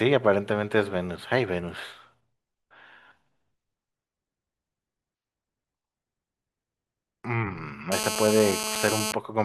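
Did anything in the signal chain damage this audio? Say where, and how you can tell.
Yes. From 7.92 to 9.12 s a hard, raspy buzz at about 217 Hz, rich in harmonics and only about 4 dB below the speech, sits steadily over it. This is GSM phone buzz: a nearby 2G handset on a call, its radio bursts rectified in the analogue wiring.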